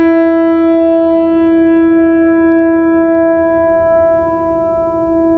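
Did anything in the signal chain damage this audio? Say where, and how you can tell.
Yes, there's gain pumping all the way through this music, likely from input gain set far too hot with a fast limiter clamping down. The gain swings around 20 dB, so the dynamics sound squashed flat.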